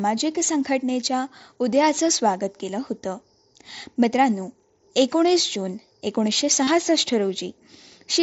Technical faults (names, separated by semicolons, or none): concealed Bluetooth headset packet loss